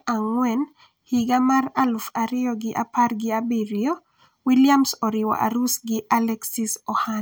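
A speech recording in which no technical fault can be heard anywhere in the signal.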